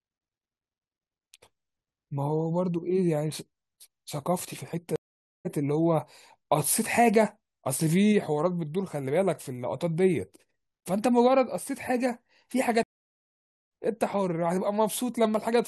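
Twice the speech cuts out and picks up further along: a 0.49 s gap from 4.96 to 5.47 s skipping roughly 0.3 s, then 0.88 s of silence from 12.83 to 13.71 s skipping about a second. Both are stream reconnects, where the connection dropped and a fresh decoder resumed the live stream later.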